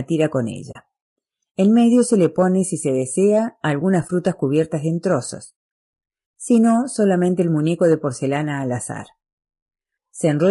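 It's a speech clip with a rough, grainy texture throughout, with noise filling in between the pitch harmonics and a top band that sounds thin and a bit synthetic. That's low-delay AAC compression, likely AAC-ELD, whose short frames handle harmonics poorly, and the damage is plain enough to point to a low bitrate of around 32 kbps. There's also AAC frame loss with muting: dropouts at 0.71 to 0.76 s (40 ms), 4.07 to 4.10 s (20 ms) and 6.39 s (80 ms), where lost frames decode as silence and the sound fades out and back in.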